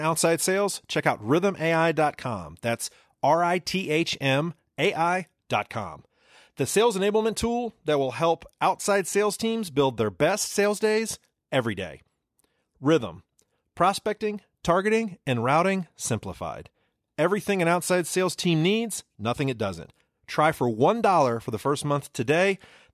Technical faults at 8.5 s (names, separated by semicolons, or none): none